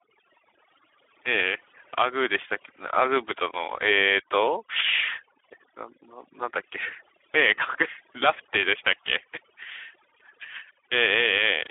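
From start to finish the speech carries overdone noise removal. A suppressor set too aggressively has pushed bands near its noise estimate far down or off, taking quiet speech detail with them, so pauses fall to near silence with twinkling specks. On a spectrogram the gaps appear as dark fields with isolated bright dots, and the speech shows torn, patchy harmonics.

Also running throughout is Speex codec damage, plainly audible. The low-rate speech coding, which points to a setting around 11 kbps, leaves too few bits for the excitation, giving a hoarse, noisy texture. Audio is confined to a telephone band of 300 Hz to 3.5 kHz, and a spectrogram shows nothing above 3.8 kHz, with a flat ceiling across the whole clip.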